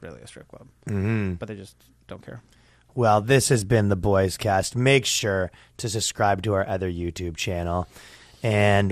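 From start to finish the speech sounds dull, with a gurgling, grainy roughness on every phrase and upper frequencies that drop in and out from moment to moment. This is likely MP2 compression at a low bitrate, consistent with around 80 kbps: the encoder runs short of bits, switches off whole high sub-bands and quantises the rest coarsely. The flickering of separate bands, rather than a fixed low-pass cut or MP3-style swirling pre-echo, sets it apart.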